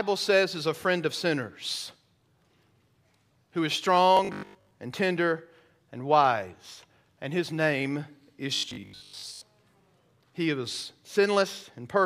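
Robotic sound from repeated short buffers appears from 4.17 to 4.71 s and again from 8.56 to 9.43 s: the speech becomes a rigid metallic buzz at 50 Hz, most likely because a 20 ms buffer was repeated while most incoming audio went missing.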